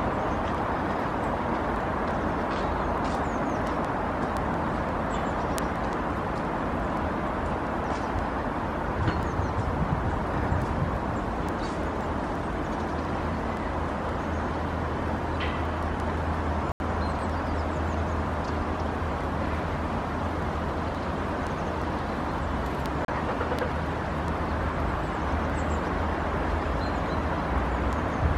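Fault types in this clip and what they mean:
Word clock ticks: A steady stream of sharp ticks of uneven strength runs from about 0.2 s right through to 28.28 s, roughly five a second and around 150 in all. Each tick is a single sample being dropped or doubled where the receiving device's own clock slips past the sender's, which points to the two clocks being off by something in the region of 150 parts per million. Because nothing locks them together, the slips keep coming at that even pace for the whole clip.
Bluetooth stall: The sound drops out to dead silence twice and then carries on: once from 16.72 s to 16.80 s, a gap of 82 ms, and again from 23.05 s to 23.08 s, a shorter 34 ms hole. The likely cause is the wireless link hiccupping, so the headphones ran out of buffered audio and simply went quiet until fresh packets arrived and playback resumed.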